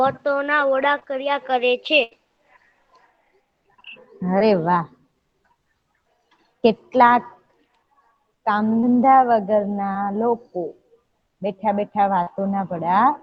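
Short concealed packet loss at 0.99 s opens a run of brief dropouts, each a smear or wobble where about 20 ms of audio never arrived in time and the receiver stretched the preceding sound across the hole before blending back. The same happens at 4.39 s, 8.80 s and 9.92 s, and at 12.22 s the gap doubles to about 40 ms, so the patched stretch there sounds longer.

A burst of packet loss at 2.03 to 2.13 s removes about 80 ms. It carries the last sound forward and lets it fade as the gap lengthens, giving a held, dimming tail. The audio then resumes further along, with everything that fell inside that stretch simply gone rather than delayed.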